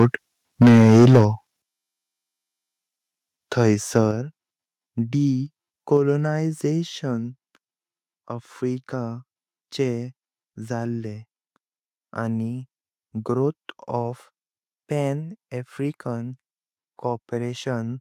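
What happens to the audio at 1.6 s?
At 1.62 s the whole speech signal, voice and background together, drops by about 9 dB in a single step and stays lower. This is a microphone volume stepped down fault, likely the call software cutting the device's input gain after judging the level too high.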